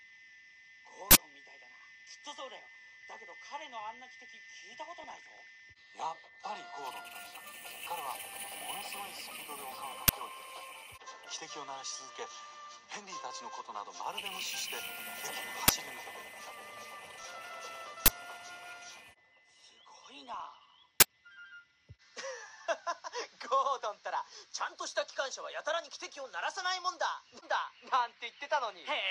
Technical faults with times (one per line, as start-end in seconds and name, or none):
0.00-29.11 MP2 compression
1.11-1.15 uninitialised buffer
5.02-5.60 DAB burbling
10.08 uninitialised buffer
15.68 uninitialised buffer
17.19-17.30 loose connector crackle
18.06-18.08 uninitialised buffer
20.34-20.83 DAB burbling
21.00-21.02 uninitialised buffer